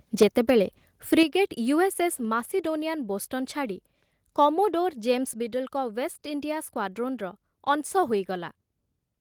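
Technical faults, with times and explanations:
1.12–1.23 s, microphone overload: the loudest part of the speech takes on a harsh, crackling edge, with peaks running about 2 dB past the converter's limit and a small fraction of samples flattened at that limit. The likely cause is an input level set high enough to drive the converter into clipping.
1.23 s, microphone volume stepped down: immediately after the distorted peak, speech and background both drop by about 6 dB in a single step rather than a gradual fade. This is likely the call software reacting to the clipping by cutting the device's input volume at once.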